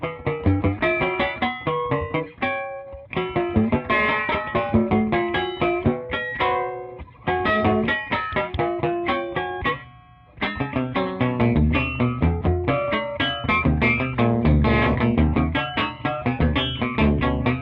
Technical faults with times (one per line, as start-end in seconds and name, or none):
none